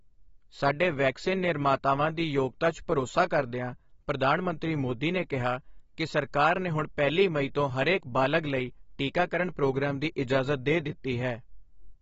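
Throughout the speech, nothing is present above about 7.6 kHz, and the plainly audible damage sounds dull and smeared, with a fizzy, warbling edge on sibilants. This is likely AAC compression, where too few bits force a lowered cut-off and coarse quantisation, consistent with AAC-LC near 28 kbps.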